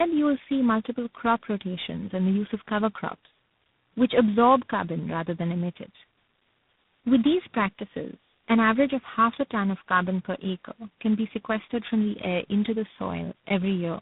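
Tandem speech coding runs through the whole clip. The speech sounds like it passed through about four speech codecs in turn, each recoding the last one's damage. The result is rough, muffled and warbly. Nothing survives above 3.8 kHz.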